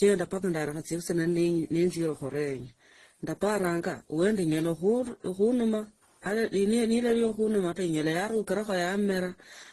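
This speech clip has most likely been through transcoding between lossy codecs across its full length. Its layered codec artefacts fit a very low-bitrate Opus pass followed by AAC and Opus re-encodes, each stacking its own artefacts on the last, and nothing remains above 12 kHz.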